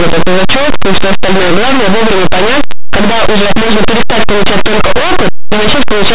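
Speech runs under harsh, very loud distortion from start to finish. The cause is linear audio read as companded. Plain linear 8-bit samples are decoded as mu-law, so small values just on one side of zero become the loudest outputs.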